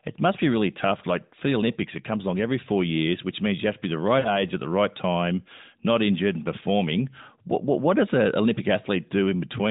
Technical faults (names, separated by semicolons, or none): lost AMR speech frames